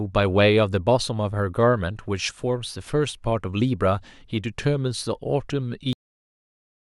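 A cut-off end at 5.93 s stops the speech mid-sound and drops it straight to digital silence for the remaining second, with no natural decay or tail. The final stretch of audio was never written out or played, so the recording simply ends abruptly.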